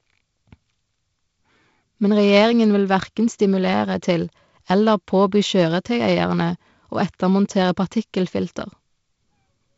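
The speech has come through G.722 wideband telephone coding, with content reaching up to about 7.7 kHz and nothing above, and the light coding grain in both bands fits the codec's lowest 48 kbit/s mode.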